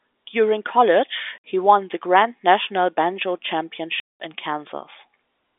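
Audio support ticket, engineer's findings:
Packet loss filled with silence. Hard-edged dropouts at 1.38–1.44 s, before "he won the", and 4.0–4.2 s. Gaps of 60 and 200 ms, consistent with 20 ms packets. Jitter buffer inserting silence, no concealment.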